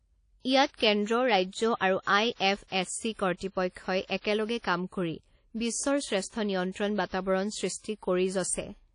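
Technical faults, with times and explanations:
Throughout, WMA compression, likely: plainly audible ringing, washy smear and hiss that breathes with the speech, as long transform blocks spread quantisation noise at a rate fitting about 32 kbps. A spectrogram shows nothing above 10.1 kHz, with patchy gaps where weak components are zeroed.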